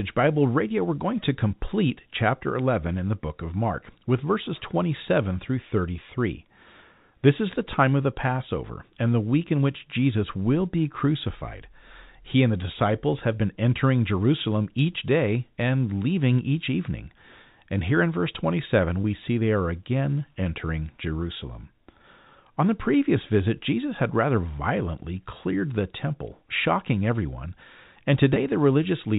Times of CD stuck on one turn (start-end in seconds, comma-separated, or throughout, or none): none